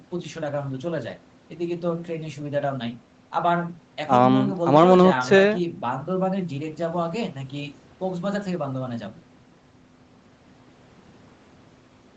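The speech clip has nothing technically wrong with it; the thin low end comes from call microphone processing, which normally filters out the deepest bass.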